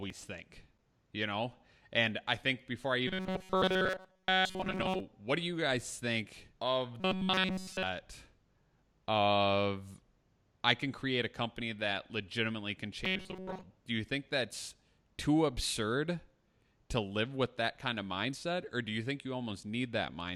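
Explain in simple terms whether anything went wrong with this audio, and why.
Three stretches of this speech turn into robotic sound from repeated short buffers: 3.08 to 5.00 s, 7.00 to 7.83 s, and 13.05 to 13.64 s. The voice becomes a stiff, metallic buzz at a fixed 188 Hz, most heavily in the middle stretch. The likely cause is audio arriving too late, so the player loops a tiny slice of about 5 ms instead of going silent. Unlike a plain dropout, the sound never stops. It keeps roughly following the speech on one unchanging pitch.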